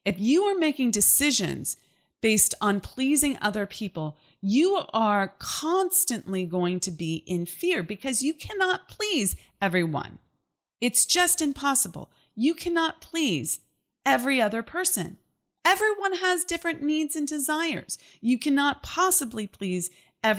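Nothing in this speech recording stood out as a technical problem on listening.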